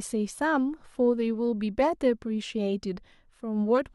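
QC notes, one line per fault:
No faults found in this clip.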